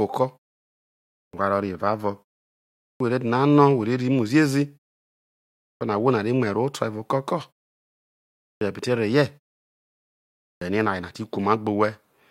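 At 1.28, 2.94, 5.75, 8.55 and 10.56 s there's a clipped start after a pause: after each gap of roughly 0.8 to 1.3 s, the output is still waking up, so about 53 to 63 ms of speech onset is lost and the phrase pops in abruptly.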